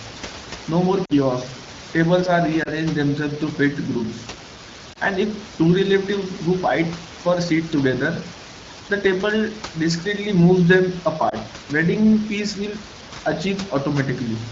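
At 1.05 to 1.13 s there's a short drop to near silence, which fits two lost 20 ms frames. Then single-frame dips at 2.63 to 2.69, 4.93 to 4.98 and 11.29 to 11.36 s give quick warbles. These are lost AMR speech frames. Corrupted frames failed their check, so the AMR-WB decoder, otherwise clear at 12.65 kbit/s, patched them by repeating the last good pitch and spectral shape at dropping gain. Speech then returns a touch weak or rough, under room noise about 14 dB down.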